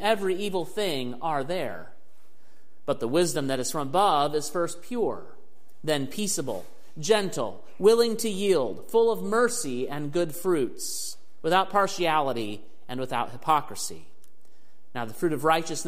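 A DC offset runs through the whole clip. The waveform sits shifted off zero by a constant amount, about -33 dBFS. You cannot hear it directly. It eats into headroom and shows as steady energy at the very bottom of the spectrum.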